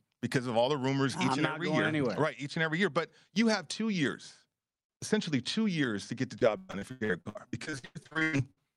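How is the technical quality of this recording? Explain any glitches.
The recording has one clear fault. Repeated packet loss (robotic sound) runs from 6.39 to 8.59 s, right after "years to get the". Many gaps, the longest 119 ms, are filled by stretching the previous sound, covering about 42% of that stretch. The result is choppy audio with pieces missing. Unlike a single dropout, it recurs rapidly.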